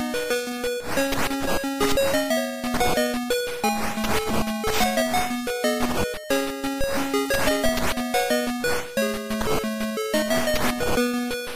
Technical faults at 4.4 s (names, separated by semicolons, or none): none